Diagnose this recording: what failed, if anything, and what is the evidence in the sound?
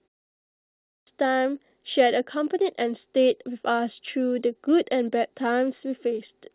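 The failure is a clipped start after a pause, at the playback stage. After about half a second of silence, the speech cuts in abruptly at 1.07 s, with its opening sounds missing. The output device dozed through the quiet and took roughly 0.55 s to wake, swallowing everything from 0.52 s to 1.07 s. The dull top end, with nothing above 4 kHz, fits a G.711 mu-law call path at 64 kbps.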